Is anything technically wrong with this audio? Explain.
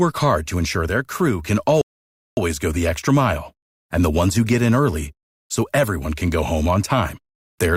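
Yes. There is a rebuffering stall in this speech clip. At 1.81 s the sound cuts to silence. It stays silent until 2.37 s, then carries on from exactly the point where it stopped. The player had run out of downloaded audio and had to wait for more data to arrive. No audio is lost. Instead, the gap adds about 0.56 s to the running time.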